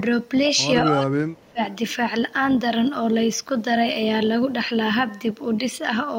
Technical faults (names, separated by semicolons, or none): speech suppressed in double talk